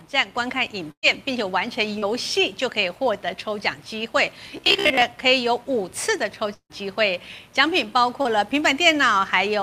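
At 0.91 s there's a burst of packet loss running to about 1.06 s. Roughly 120 ms of audio never made it. The receiver papered over the hole by carrying the last bit of sound forward and turning it down as the gap went on. So you hear a held, fading smear that sinks into near silence for its last stretch. Then the audio picks up further along, with that chunk just gone.

Around 1.99 to 2.05 s comes the first short concealed packet loss. About 40 ms went missing, and the decoder patched it with a quick synthetic continuation of whatever was sounding, then blended back into the real signal. It's a brief wobble or smear rather than a clear dropout. The same thing happens again at 8.22 to 8.28 s, with the same size of gap and the same blurred little blip.

From 4.48 to 5.02 s the sound turns robotic, a rigid metallic buzz sitting at about 67 Hz that still roughly tracks the contour of what's underneath. 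That's most likely repeated short buffers. New audio wasn't arriving often enough, so the playback side kept looping the last tiny slice, and the 67 Hz buzz matches a slice of about 15 ms. Somewhere around half of that stretch seems to be repeats rather than fresh audio.

At 6.54 s there's a long network dropout lasting to about 6.73 s. Around 160 ms of audio is missing. The concealment carries the last sound along as a fading buzz or hiss. The final 70 ms or so is left silent before the audio comes back, skipped ahead past the lost section. A stall in the network is the likely cause, given how the whole block vanishes at once.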